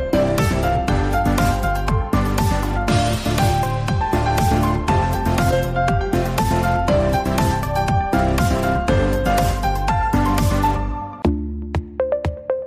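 A brief chirp-like blip at 5.51 s is a corrupt frame decoded: flipped bits in a single compressed frame misplaced energy, peaking around -15 dBFS.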